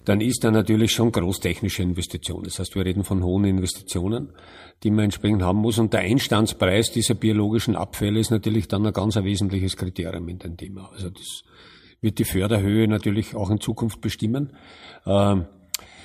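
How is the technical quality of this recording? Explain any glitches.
The recording has one glitch, confined to the opening 2 seconds (0.0 to 2.0 s): video or display buzz. A screen or video cable was coupling into the audio path, putting a buzz at the 59.94 Hz field rate with hash above it and a thin 15.7 kHz line-rate whine, sitting about 25 dB below the speech.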